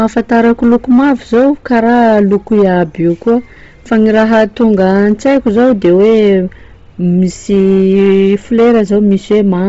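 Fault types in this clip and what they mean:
Hard clipping: The speech is driven about 7 dB past what the chain can pass, so peaks are sliced flat, roughly 7 percent of samples. The waveform shows squared-off tops, and the spectrogram shows smeared harmonic energy rising on loud syllables, heard as harsh fuzz.
Bluetooth LC3 compression: A low-bitrate transform codec, likely LC3, explains the heavy damage: upper bands are dropped and patched with noise, giving the speech a breathy, grainy edge. On a spectrogram everything stops near 7.7 kHz, with blotchy, noise-filled texture below that cut-off, consistent with roughly 24 kbps.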